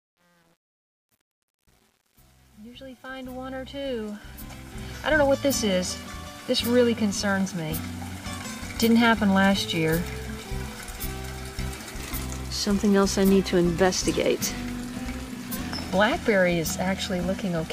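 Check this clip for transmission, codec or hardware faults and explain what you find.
One fault turns up, at the start of the clip.

Truncation distortion on a fade runs from 0.0 to 5.43 s and is worst from 0.0 to 4.38 s. The quiet part sounds gritty and grainy rather than smooth. The fade stage appears to keep too few bits without dither, which fits a 9-bit stage, so low-level waveforms collapse into coarse square steps.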